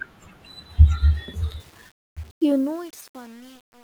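From 1.6 s to the end, the speech fade-out shows truncation distortion on a fade. The level stage drops low bits without dither, which fits a 10-bit path. After 2.42 s the tail turns gritty. The waveform becomes square steps, and the spectrogram shows broadband fizz.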